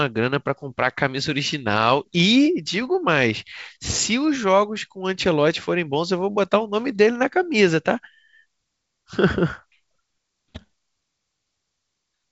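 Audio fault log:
No faults are present: the speech carries the band limit of G.722 wideband telephone coding, with nothing above about 7 kHz, and its coding damage is at most faint, which fits the codec's full 64 kbit/s rate.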